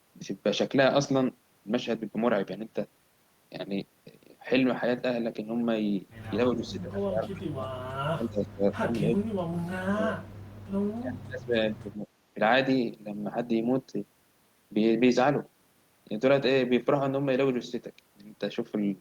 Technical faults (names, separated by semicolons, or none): speech suppressed in double talk; echo leak